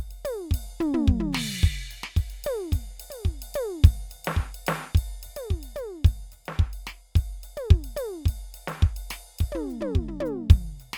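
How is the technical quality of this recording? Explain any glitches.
Nothing here needs explaining, as the music runs along without any glitches, dropouts or other technical problems turning up anywhere in the recording.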